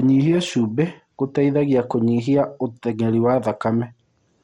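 Speech running the full length of the clip carries plainly audible MP2 compression damage throughout, with nothing present above 16.6 kHz. The top end sounds dull, and the remaining content has a gurgling, granular texture as coarsely quantised sub-bands flicker in and out. This is likely MPEG Layer II encoding starved of bits, a pattern that fits a low bitrate in the region of 64 kbps, where the encoder drops upper bands and crudely quantises the rest.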